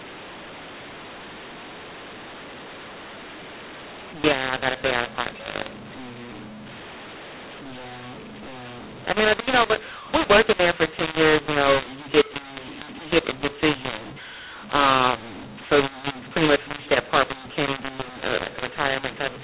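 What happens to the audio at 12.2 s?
The mu-law and A-law mix-up runs through the whole clip, including 12.2 s: A-law samples are decoded as mu-law, scrambling the levels. The speech sounds harsh and distorted, and pauses fill with hiss. On a waveform, the amplitudes look jagged and the gaps never settle to zero; on a spectrogram, the pauses show a noise floor beneath the 4 kHz ceiling.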